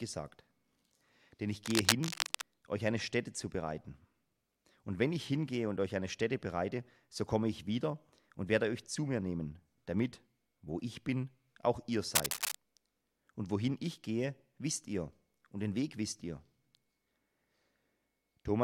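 Cable scratch noise breaks in twice, from 1.65 to 2.43 s and again from 12.15 to 12.55 s, as a dense, ragged scratching and rustling laid over the audio at roughly the same level as the sound itself. The likely cause is a worn cable, connector or control being moved, so that its contact resistance jumps about rapidly and injects uneven bursts of noise into the signal for as long as the movement lasts.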